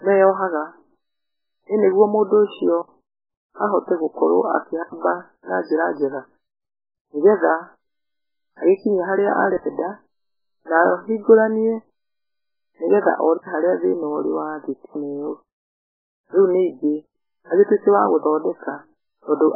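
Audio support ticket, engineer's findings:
MP3 compression, whole clip. Speech dull and watery, nothing above 5.1 kHz, swirling on sibilants, smeared onsets. Likely cause: MP3 encode at a very low bitrate, heavy damage. Encoder starved of bits, treble cut at a fixed point, weak spectral lines dropping in and out frame to frame. Source audio needed; re-encoding won't restore it.

Block of digital silence, five events. Hard dropouts, no fade: 2.82 s (63 ms), 4.83 s before "na njra njega", 9.57 s after "agĩkinye harĩa", 13.38 s before "harĩa thĩna ũrĩ wa", and 14.86 s, the last four each 93 ms. Likely output buffer not filled in time, zeros written in its place. The 93 ms holes fit a 4096-sample buffer. Check the playback thread scheduling.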